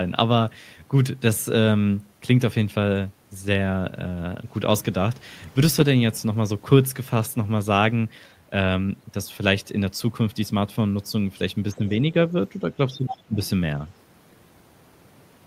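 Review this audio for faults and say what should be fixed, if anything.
Speech suppressed in double talk occurs twice. From 11.72 to 11.82 s the voice dips by about 15 dB for roughly a tenth of a second, and from 12.9 to 13.36 s it drops much deeper, by about 30 dB, for roughly 0.4 s. Both dips coincide with a second voice arriving, so the likely cause is the echo canceller treating the moment as echo and pulling down everything on the microphone path. Unlike a network dropout or gating, the cuts line up with the other side's speech. Tuning double-talk detection so the canceller holds adaptation instead of attenuating would prevent this.

The other side's voice leaking through is audible in three places. It is a faint scrap from 11.72 to 11.92 s, about 25 dB under the talker. It is far more obvious from 12.92 to 13.15 s, only about 10 dB down. A brief faint fragment follows at 13.43 to 13.49 s. 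It is a distinct second voice, not a delayed copy of the talker's own words, which separates it from ordinary room echo or reverb. It likely comes from loudspeaker output that the canceller failed to subtract during the same overlap. Better acoustic isolation between loudspeaker and microphone, or a headset, would prevent it.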